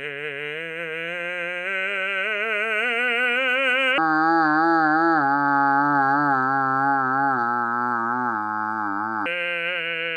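At 3.98 s the music drops into a section at the wrong speed, running at 0.548 times its proper rate until 9.26 s, so everything turns slow and sinks roughly ten semitones in pitch. The likely cause is playback or an edit clocked at the wrong rate. On a spectrogram the harmonics shift down abruptly at 3.98 s and spread farther apart in time; the waveform's cycles and attacks stretch visibly.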